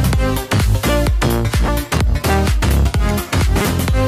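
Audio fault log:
No faults heard anywhere in this audio.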